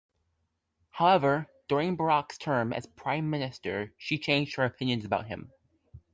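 No technical faults are audible anywhere in the speech.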